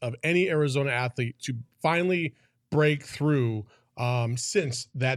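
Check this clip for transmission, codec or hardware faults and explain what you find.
One fault: a Bluetooth SBC bit pool drop from 4.57 s to the end. The link congested and the encoder fell back to a much smaller bit pool, roughly 88 kbps, so the top sub-bands got few or no bits and the rest were coarsely quantised. The speech turns dull, with gritty noise underneath.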